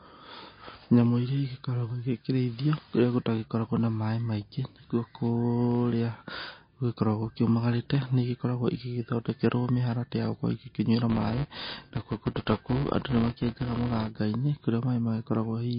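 From the start of the speech, the treble is gone: nothing sits above 5 kHz, and the sound has a plainly audible watery, swirling quality, with s sounds turned metallic and attacks smeared. The likely cause is MP3 compression at a low bitrate, which fits something around 24 kbps. With so few bits, the encoder drops weak frequency lines that then flicker on and off between frames. A spectrogram shows a hard ceiling at 5 kHz and patchy, blinking islands of energy below it.

At 11.1 s, just after "mĩharatĩ ya gũkorwo igĩkĩnyuĩra", a buzz at 200 Hz appears and lasts until 14.1 s. This is a filter restarted on every block: the filter loses its state at each block boundary and starts again from silence, so every block opens with a small transient. Its loudness follows the speech level. On the waveform, tiny spikes repeat every 5 ms, and on the spectrogram they form thin vertical striations with a harmonic comb at multiples of 200 Hz.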